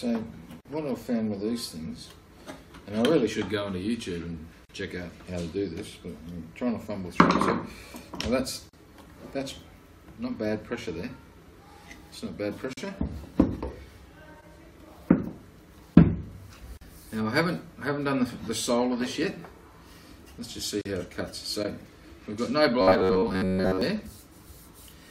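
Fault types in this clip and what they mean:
Gap at a join of encoded pieces: separately encoded segments joined with their encoder delay and padding left in, so a silence of about 40 ms (46 ms at first) opens every 4 s. Unlike a dropout, the sound resumes exactly where it stopped.
Robotic sound from repeated short buffers: from 22.81 to 23.81 s the sound turns into a rigid metallic buzz at 93.8 Hz, likely from playback repeating a roughly 11 ms buffer while most real audio is skipped. Unlike the join gaps, nothing falls silent.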